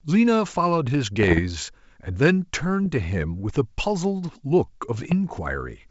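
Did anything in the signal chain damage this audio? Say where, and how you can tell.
Yes: bit errors on an ADPCM link in transmission. Rough pops at 1.20–1.40, 2.84–2.86 and 4.95–5.14 s; flipped bits knock the decoder's step size off.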